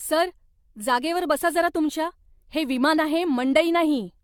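Throughout, likely about seven rounds of lossy re-encoding cause generation loss: the speech sounds swirly and hollow, attacks blur, and nothing sits above 17 kHz.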